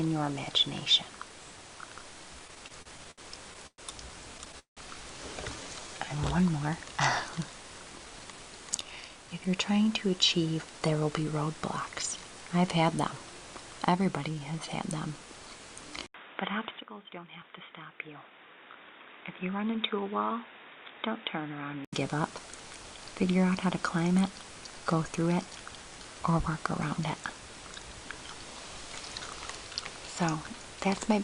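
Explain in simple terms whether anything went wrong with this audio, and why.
Several things went wrong, in four kinds.

Repeated stalls (stutter): network packets kept arriving late, so the player ran dry and stretched the last sound. From 2.47 to 3.81 s and 4.38 to 4.80 s the audio drags and stutters.

Jitter buffer slow-down: the receiver's reserve was low, so it repeated tiny slices to rebuild it. The audio plays slower at the same pitch, at 5.56 to 6.16 s and 14.35 to 14.67 s.

Jitter buffer speed-up: too much audio had piled up, so the receiver trimmed tiny slices out. The sound runs about 12 to 13 percent fast, sounding hurried, at 7.98 to 9.56 s and 16.64 to 17.69 s.

Input switched to a poorer device: the recording likely changed microphones partway through. From 16.06 to 21.93 s there is a brief 80 ms silence, then duller sound, somewhat quieter, with added background noise.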